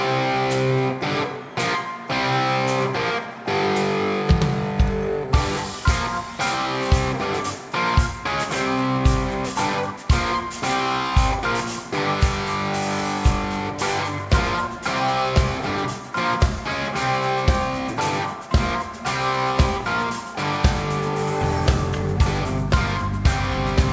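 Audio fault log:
Throughout, aliasing: content above 8 kHz folds back as unrelated pitches roughly 20 dB below the signal, fitting a drop to 16 kHz without an anti-alias filter.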